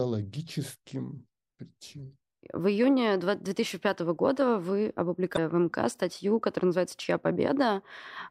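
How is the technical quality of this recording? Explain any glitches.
The recording has one technical fault, a brief burst of damaged data in a compressed stream. It runs from about 5.34 to 5.38 s, roughly 40 ms. At that point the compressed data was corrupted, so the decoder misread the affected frames, lost sync, and had to search for the next valid frame header before resuming. It is heard as a short chirp, squawk, click or short hole in the speech. On a spectrogram and on the waveform it shows as a short patch that breaks from the surrounding speech.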